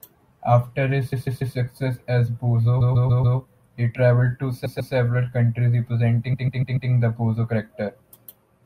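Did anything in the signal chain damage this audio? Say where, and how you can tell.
Yes. The speech stutters four times, looping the same 144 ms slice: three extra plays from 1.12 to 1.55 s, four from 2.80 to 3.37 s, two from 4.65 to 4.93 s, and four from 6.33 to 6.90 s. These are repeated frames at the codec or storage stage. A block of compressed frames, consistent with six frames per block, was written or delivered more than once, so the decoder replays it, lengthening the audio by up to 576 ms each time.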